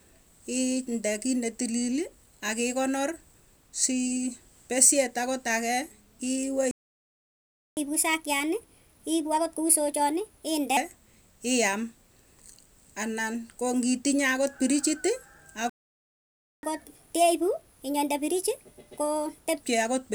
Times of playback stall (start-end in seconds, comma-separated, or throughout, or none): 6.71-7.77, 15.69-16.63